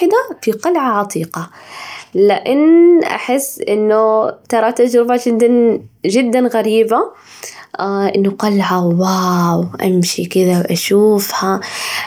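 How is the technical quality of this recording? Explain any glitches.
The recording's signal path holds steady throughout, with no glitches or technical faults to report.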